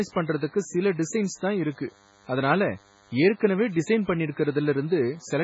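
From start to finish the speech carries a DECT cordless phone buzz: a thin, steady rasp at 100 Hz, sitting roughly 35 dB below the speech. A nearby handset or base station transmitting a radio burst every 10 ms gets rectified in the audio circuit, so the pulses become sound. Unlike mains hum, which is a rounder, smoother tone at 50 or 60 Hz, this one is pulse-like and bright, with a dense ladder of harmonics spaced 100 Hz apart.

Also running through the whole clip, the speech sounds watery and swirly, and nothing is present above 7.7 kHz. The likely cause is MP3 compression at a very low bitrate, which fits something near 16 kbps. Starved of bits, the encoder cut the treble at a fixed point and dropped weak spectral lines that flicker in and out between frames, which smears consonant onsets. A plain low-pass filter would only sound dull. The shimmering, bubbling artefacts mark this as codec damage, and here that damage is heavy.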